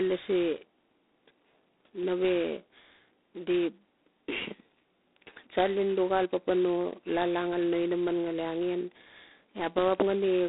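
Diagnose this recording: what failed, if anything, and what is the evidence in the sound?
The codec stage is the culprit here: this speech has been through G.726 ADPCM, and the sound points to its lowest, 16 kbit/s mode. From start to finish there's a rough, rasping hiss riding on the speech, rising and falling with its level. That's the coder spending only a couple of bits a sample on the difference from its running prediction. The band sits at roughly 250 Hz to 3.7 kHz, with nothing above 3.8 kHz.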